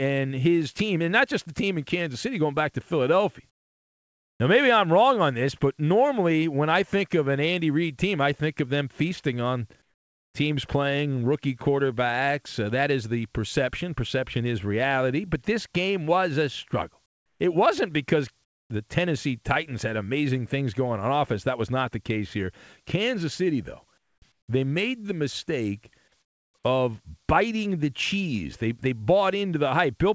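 Comfort noise in place of the background appears in this speech clip at 3.50–4.40, 9.82–10.34, 17.06–17.40, 18.44–18.70, 23.98–24.22, 24.32–24.48 and 26.22–26.54 s. In each pause the real background gives way to steady, featureless noise about 12 to 20 dB quieter. This is likely from discontinuous transmission on a call path, where the receiver synthesises noise while the sender is silent. Nothing is heard above 8 kHz, which fits a wideband call codec such as G.722.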